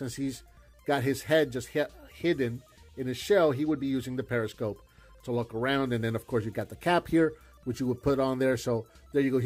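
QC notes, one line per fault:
Nothing to flag here, as I didn't hear any problems anywhere in the clip.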